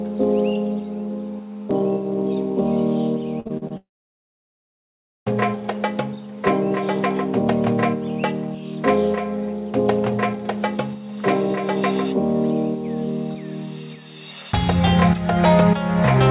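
At 3.4 s there's a burst of repeated packet loss running to 3.72 s. Four short holes, the longest about 52 ms, are each patched by stretching the sound just before, so nearly half that span is filler and it comes out choppy and robotic.

Right after, from 3.77 to 5.28 s, the audio drops out entirely, likely a long network dropout. The receiver smears the last sound into a quickly fading buzz, then there's roughly 1.4 s of silence before the audio picks up again with that chunk missing.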